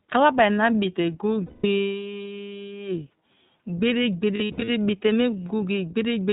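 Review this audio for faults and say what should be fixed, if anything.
The speech is carried throughout by the iLBC codec. Content above 4 kHz is missing, and the voice has a plainly audible rough, synthetic edge. Each frame's excitation is coded on its own at a low rate, which fits the 15.2 kbps mode with 20 ms frames. To prevent it, use a wideband codec such as Opus, or a higher-rate codec, where the link allows.

Lost iLBC frames occur at 1.46–1.66 s and 4.36–4.70 s. In each gap the decoder repeats the last pitch cycle mixed with noise, heard as a held, buzzy vowel. The first gap covers about 180 ms, which points to nine consecutive lost frames. The second totals about 220 ms, scattered over 320 ms, with the longest run around 70 ms. Each time, the voice recovers almost at once because iLBC frames are independent. To prevent it, reduce packet loss on the network path, or add redundancy or FEC and a larger jitter buffer.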